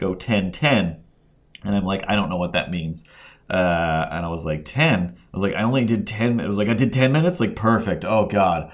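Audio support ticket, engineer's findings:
No faults found in the speech clip on listening. Nothing to attribute to any component; no action required on this ticket.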